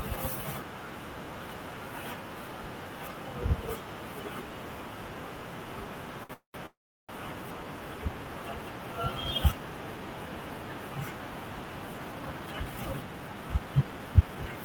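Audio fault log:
6.23–6.32 s, short stall from a late packet: The sound is held for 60 ms with a slight buzz or dip, then carries on from the same point. A packet arrived late and the jitter buffer ran dry. The receiver stretched the last bit of sound to cover the wait. Nothing is lost. The audio just pauses in place, and from here it runs 60 ms later than before.
6.33–6.57 s and 6.66–7.12 s, call audio freeze: The sound stops twice in quick succession. The first freeze fills 206 ms. A short buzz or hiss fades into about 130 ms of silence. The second fills 426 ms, with a brief fade and then about 360 ms of silence. Each time the audio resumes where it stopped. The likely cause is packets held up in transit, emptying the jitter buffer. The receiver extended the last sound until it died away. Gaps are inserted but nothing is missing.
11.98 s to the end, jitter buffer speed-up: The sound runs at about 113% speed to the end of the clip. 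The pitch stays the same, so it sounds hurried rather than higher. After the earlier stalls, the buffer held more audio than it aims for. The receiver trimmed many short slices, each one or a few pitch periods long, to reduce the delay. Roughly 0.4 s is removed in total. This claws back the lag built up by the freezes.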